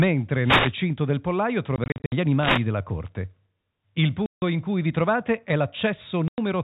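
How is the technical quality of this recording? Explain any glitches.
The speech is marred by two kinds of glitch: brief bursts of radio static and hard-edged holes where sound drops out. The narrowband telephone character itself comes through cleanly.

Wireless microphone noise hits occur at 0.42 to 0.75 s, just before "del pollaio", and again at 2.37 to 2.66 s. Each is a short swish of static lasting about a third of a second. An analogue FM radio link fades when reflected copies of the signal cancel at the receiver. As the carrier weakens, the receiver's own hiss rises over the speech and can break into crackle.

Packet loss filled with silence appears three times. From 1.76 to 2.12 s, just after "del pollaio", 200 ms of sound vanishes in scattered gaps across 360 ms, the longest about 60 ms. Another 160 ms goes missing at 4.26 to 4.42 s, right before "in cui vi trovate", and a further 100 ms at 6.28 to 6.38 s. 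Missing network packets were replaced with silence, leaving abrupt edges and gaps whose lengths fit 20 ms packets.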